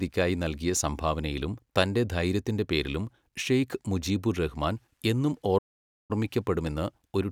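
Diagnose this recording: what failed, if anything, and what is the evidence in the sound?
The failure is a playback stall. The speech cuts to silence at 5.58 s and resumes at 6.11 s, a gap of about 0.51 s. The output went dead mid-flow, most likely because the player ran short of data or its thread was blocked.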